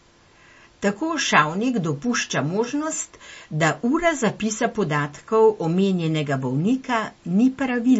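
Throughout the speech there is plainly audible damage of the kind MP3 compression leaves, likely from a low bitrate around 34 kbps. Nothing remains above 7.6 kHz, so sibilants sound dull, and weak detail flickers in and out between frames, giving a watery, swirling texture.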